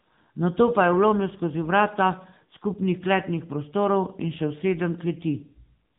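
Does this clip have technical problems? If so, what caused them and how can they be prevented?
Yes. AMR narrowband mobile codec damage runs throughout the speech: nothing passes above 3.8 kHz, and the low-bit pulse-driven vocal-tract model leaves a plainly buzzy, synthetic edge, which fits a mode of roughly 8 kbps. Recording locally or using a wideband codec at a higher bitrate would prevent it.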